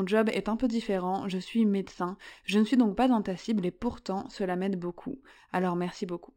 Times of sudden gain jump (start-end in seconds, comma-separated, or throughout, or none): none